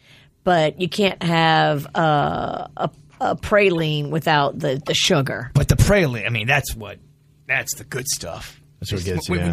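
Corrupt frame decoded at 3.75–3.81 s, 4.82–4.89 s and 6.40–6.42 s: the decoder played compressed frames with flipped bits, so misread codes and gains sent energy to the wrong frequencies. Each event is a brief chirpy burst peaking around -15 dBFS, spanning a few frames.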